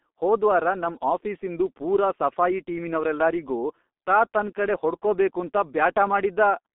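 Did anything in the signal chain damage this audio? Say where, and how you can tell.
Yes. G.723.1 codec damage at the codec stage runs through the whole speech clip. The band stops near 200 Hz and 3.6 kHz, leaving it muffled, with hoarse, smeared consonants. The 30 ms frames update the voice model slowly, and the heavy loss fits about 6.3 kbit/s.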